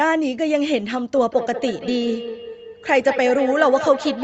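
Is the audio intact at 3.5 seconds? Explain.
No, feedback echo between two devices runs from 1.16 s to the end: a second device replays this microphone's sound, which returns about every fifth of a second, reaching about 9 dB below the speech.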